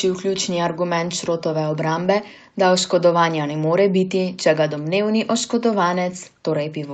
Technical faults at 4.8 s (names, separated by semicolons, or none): echo leak